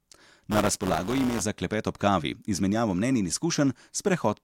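From 0.50 to 1.43 s, before "za klepet ob kavi", buffer tearing gives a 172 Hz buzz, fitting a 256-sample buffer, heard only during speech.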